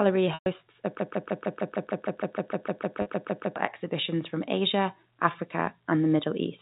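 At 0.34 s there is packet loss with pitch repetition lasting 120 ms, a gap that fits six 20 ms packets going missing. The receiver filled it by repeating the last pitch period of the speech, so the sound holds and takes on a buzzy, static quality. Because the gap runs past the roughly 50 ms the repeated period can sustain, it fades toward silence before the speech resumes at 0.46 s through a short cross-fade.

From 1.0 s to 3.56 s a broken-record loop takes over. A 153 ms fragment repeats back to back, about 17 times, with identical content on every pass. The likely cause is a stalled player, encoder or stream that kept resending the last piece it held. Whatever should have been heard during those 2.6 seconds is gone.

A second, shorter packet loss with pitch repetition occurs at 3.02 s, inside the loop, bridging 40 ms. That fits two packets. The concealment holds a single pitch period for that short span and does not have time to fade fully.

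From 3.89 s to 6.57 s, automatic gain is rising. The gain control judged the input too quiet and raised its gain by about 4 dB over those 2.7 seconds. The speech and the background swell together, steadily rather than in steps. Across the clip, the G.711 A-law telephone coding cuts everything above 4 kHz, giving the audio its narrow telephone band.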